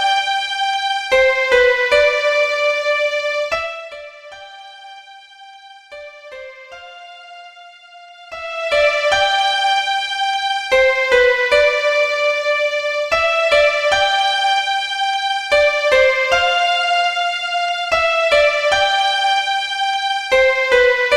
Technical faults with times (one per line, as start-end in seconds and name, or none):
3.46-3.98 zipper noise
8.11-8.85 zipper noise